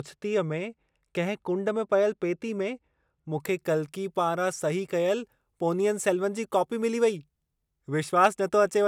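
From 0.0 to 3.4 s the speech sounds dull and muffled, the mark of de-emphasis applied wrongly: a treble cut was used where no pre-emphasis existed, or was applied twice. On a spectrogram the upper bands fade smoothly, about 10 dB down at 10 kHz relative to 1 kHz.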